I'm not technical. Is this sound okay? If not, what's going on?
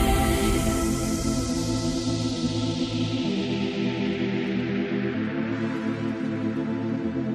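No. The whole clip sounds watery and swirly, with smeared attacks. That is likely MP3 compression, squeezed hard enough to lose detail.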